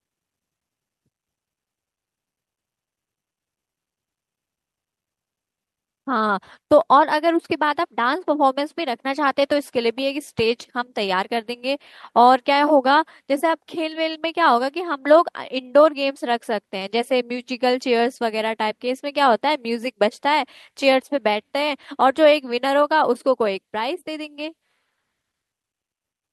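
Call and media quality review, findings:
No audible faults found in this speech recording.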